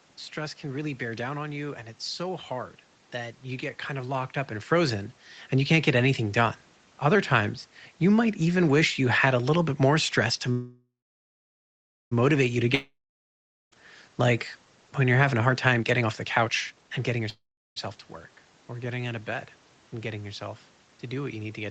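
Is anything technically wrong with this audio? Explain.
Yes. There are two call audio freezes, a long network dropout and a jitter buffer speed-up.

The first call audio freeze runs from 10.51 to 12.13 s, right after "bit more stress to". The cause is likely packets held up in transit until the jitter buffer ran empty. The receiver extends the last sound as a fading buzz. About 1.2 s of that stretch is silence. Speech then resumes where it stopped. Nothing is lost, but 1.6 s of delay is added. A second, shorter freeze at 17.30 to 17.78 s adds about 0.47 s, with roughly 0.36 s of silence.

The long network dropout spans 12.75 to 13.81 s. Here audio stopped arriving, most likely from a network outage, and never arrived later. The last sound is stretched into a fading hiss. Then about 0.79 s of silence follows. When speech returns, roughly 0.98 s of it is simply gone. The sentence jumps forward instead of picking up where it left off.

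The jitter buffer speed-up runs from 15.23 to 17.25 s, starting after "when you're". The buffer held more audio than it aims for. To shrink that backlog, the receiver cut many tiny pitch-period slices, around 0.7 s in total. The speech plays at about 130% speed. The pitch stays the same, but the delivery sounds rushed.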